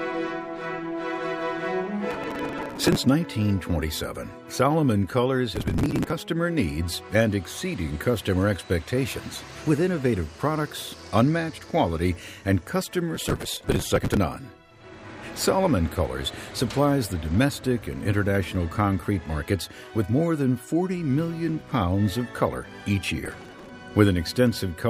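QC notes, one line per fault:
2.11–2.97 s, 5.56–6.13 s, 13.15–14.17 s, 23.25–23.69 s, processor overload crackle: the processor keeps missing deadlines on buffers a few milliseconds long. Each late buffer is skipped, so dozens of tiny hard-edged gaps pile up into gritty crackle. The 13.15 s burst runs longest.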